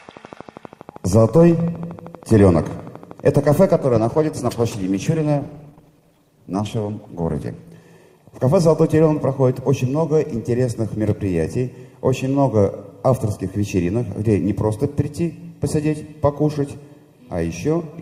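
Right from the start, at about 0.09 s, there's a train of clicks running until roughly 3.52 s: a steady ticking at about 12.6 clicks per second, around forty of them, each landing about as loud as the sound itself. They're evenly spaced and all much the same shape, so you hear them in the gaps as well as over the sound. That regular pulse is most likely interference from nearby gear or a faulty connection or power supply.

Just after that, from 3.74 s to 7.74 s, the audio drops to a lower-bitrate version of the adaptive stream. The switch is abrupt with no gap. The codec artefacts rise. It sounds like a fall from a decent Opus stream, something like 64 kbit/s, down to one near 16 kbit/s while the connection slowed.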